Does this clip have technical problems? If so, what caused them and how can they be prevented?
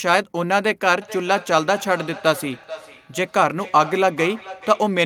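Yes. From 1.02 s to 5.05 s there is feedback echo between two devices: the speech returns roughly every 0.4 s, peaking at about 16 dB below the direct speech. A second device on the same call replays this microphone's signal, which the microphone picks up again, and the local echo canceller cannot remove it. To prevent it, join from only one device per room, or mute the other device's speaker and microphone.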